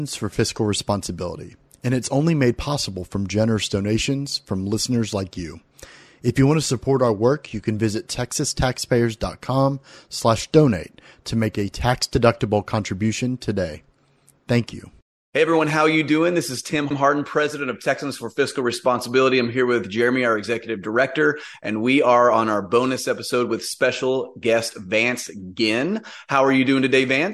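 No technical faults are audible anywhere in the speech recording.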